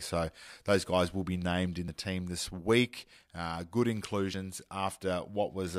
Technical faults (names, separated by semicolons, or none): audio missing between chunks